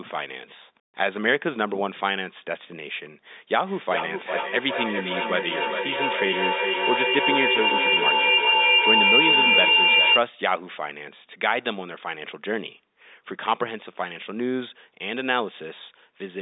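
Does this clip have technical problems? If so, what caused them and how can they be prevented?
Yes. From 3.65 to 10.29 s a feedback howl builds: two devices in the same room share the call, so sound loops from loudspeaker to microphone with gain each pass. It narrows to a tone around 3 kHz, pulsing roughly every 400 ms and peaking about 3 dB above the speech. A spectrogram shows a bright horizontal band there, and the waveform swells in beats. Muting one device or using headphones prevents it.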